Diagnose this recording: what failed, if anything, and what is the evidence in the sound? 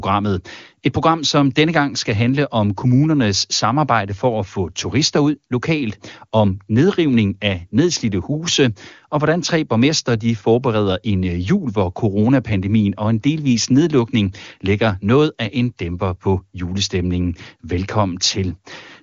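Nothing has failed: the speech has come through an AMR wideband (HD Voice) codec, and its content stops near 7.3 kHz as that codec's band limit requires, at a quality that fits its highest 23.85 kbit/s rate, with no audible breakdown at any stage of the chain.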